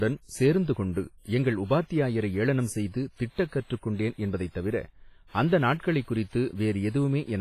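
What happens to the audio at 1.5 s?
At 1.5 s the speech sounds washy and ringing, with a hiss that swells and fades with the signal and nothing above 15.5 kHz. This runs through the whole clip and is likely WMA compression at a low bitrate, around 24 kbps, where long transform blocks smear quantisation noise across tens of milliseconds and weak components are dropped.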